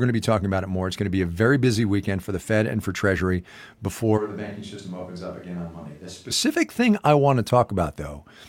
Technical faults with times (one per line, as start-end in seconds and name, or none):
4.19-6.30 switch to a distant microphone